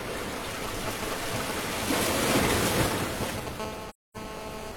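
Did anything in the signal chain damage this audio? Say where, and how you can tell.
Yes. Between 0.64 and 3.49 s, interference in the analogue wiring produces GSM signalling bursts: irregular, galloping clusters of short raspy buzzes at 217 Hz, only a few dB below the sound itself. A nearby 2G phone is keying its transmitter in short groups, and some analogue junction rectifies the radio pulses into audio. It comes and goes in clumps, which sets it apart from the continuous buzz of a phone in a call.

From 3.60 to 4.72 s the same analogue pickup becomes a steady GSM phone buzz, a hard 217 Hz drone dense with harmonics at about 10 dB below the sound. Here the phone is transmitting continuously, as it does during a call, so the rectified bursts form an unbroken buzz instead of clusters. Its fixed 217 Hz pitch and raspy harmonic edge distinguish it from mains hum, which sits at 50 or 60 Hz and sounds smoother.

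Within that stretch, from 3.89 to 4.17 s, the codec or network stage causes AAC frame loss with muting. The audio fades out, leaves a hole of about 256 ms, and fades back in, which fits several consecutive frames going missing. The decoder zeroed their content, and the overlapping transform windows round off both edges. That soft-edged gap distinguishes it from a buffer dropout, which cuts off abruptly.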